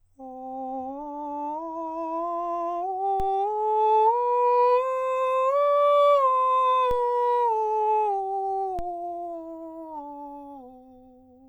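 At 3.20 s, 6.91 s and 8.79 s the music's zero line shifts abruptly. These are DC steps, each about -23 to -24 dBFS, as if an offset source were suddenly switched into the signal path. Each step is heard as a short low thump while the music carries on unaffected. The offset does not hold. It decays back toward zero over a few tens of milliseconds, which fits a high-pass filter near 5 Hz in the chain draining it away.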